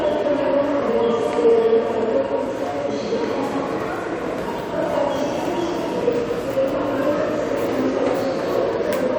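Listening closely to these everyday sounds, nothing stood out as a technical problem at any point.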